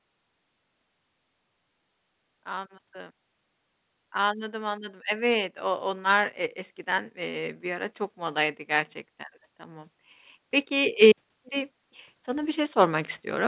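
From 4.12 s to 9.0 s the speech and the background noise swell together, climbing about 9 dB; a second swell begins at 10.68 s and runs to the end. Both are automatic gain rising, the gain control lifting its level to counter quiet input, over band-limited call audio with nothing above 4 kHz.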